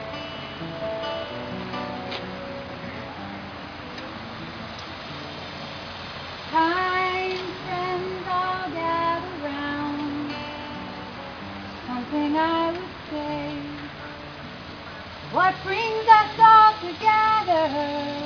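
No dropouts, clicks, distortion or timing errors are audible anywhere in the clip.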